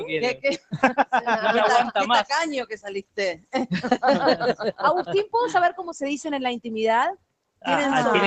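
A noise suppressor applied to music or sounds runs across the whole clip, mistaking steady material for noise and pumping the level by about 10 dB.

Sound cut by the noise suppressor occurs at 0.35–0.78 s, 2.7–3.18 s, 3.35–3.54 s and 7.16–7.64 s. Sustained parts sink by about 18 to 21 dB for a few tenths of a second, and their tails are cut short.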